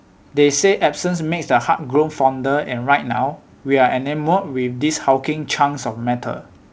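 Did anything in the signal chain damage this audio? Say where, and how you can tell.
No, nothing in the chain has damaged this speech; the top end stopping at 8 kHz is just what a wideband call path using a codec like G.722 normally does.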